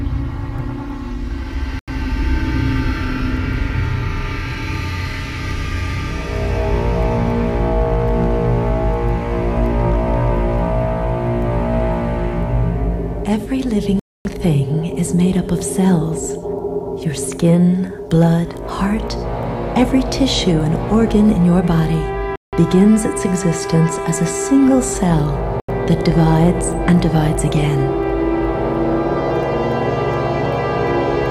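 Output buffers likely not filled in time leave blocks of digital silence at 1.79 s (85 ms), 14.00 s (256 ms), 22.36 s (171 ms) and 25.60 s (85 ms). Each is an abrupt hole.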